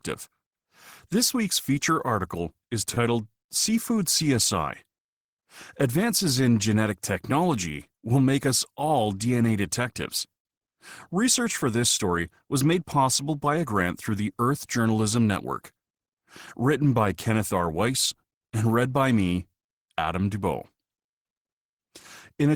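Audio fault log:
2.94–2.98 s, short stall from a late packet: just after "week's feature article is", the sound holds for about 22 ms while the jitter buffer waits, then resumes where it paused. Nothing is skipped, unlike a lost-packet dropout, so everything after arrives 22 ms later.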